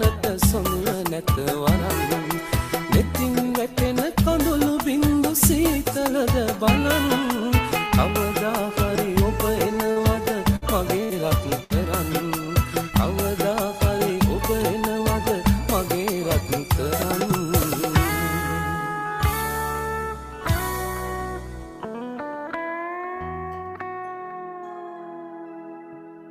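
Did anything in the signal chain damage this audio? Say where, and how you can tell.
Yes. At 9.91 to 10.00 s a short stall from a late packet holds the sound for about 45 ms in the network jitter buffer, then resumes exactly where it stopped, so nothing is skipped.

Bursts of packet loss at 10.56, 11.04 and 11.64 s each bring a fading, concealed continuation, then a jump ahead past about 60 ms of missing audio. Unlike the stall, material is actually lost.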